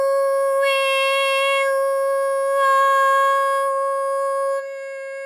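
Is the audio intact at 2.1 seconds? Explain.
Yes, at 2.1 seconds the audio is intact, with no dropout, click, distortion or other fault.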